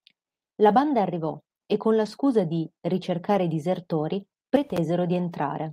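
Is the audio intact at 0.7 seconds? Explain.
No. From 0.69 to 0.79 s, just before "arrivò e con la", the speech turns rough and noisy without any gap. This is a lost packet rebuilt from error correction: the decoder played low-bitrate copies carried in the following packets for about 60 ms, which fits three lost packets.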